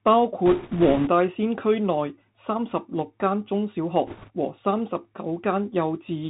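The whole recording has passed through the Bluetooth CVSD headset codec, a narrowband encoder that sends one bit per sample to say whether the waveform steps up or down. The sound fits a 64 kbps CVSD stream. Nothing above 4 kHz survives, so the speech is thin and boxy. Where loud, bright sounds rise faster than the adaptive step can follow, they distort, sibilants turn scratchy, and a grainy hiss sits beneath the speech throughout.

From 0.46 to 1.09 s, bit errors on the Bluetooth voice link flip bits in the stream, at an error rate of around 4 percent. Because each CVSD bit carries only one small step and the decoder recovers from mistakes, this produces no sharp clicks. Instead a rushing, crackly noise spreads across the speech. The same fault returns from 4.07 to 4.30 s at a slightly higher error rate, about 5 percent, and the crackle there is a little denser.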